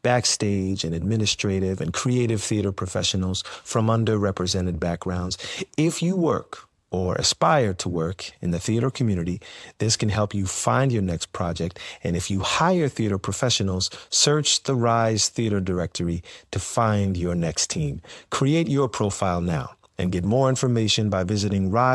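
No technical faults can be heard anywhere in the speech. Nothing in the sound points to a problem in how it was captured, processed or played back.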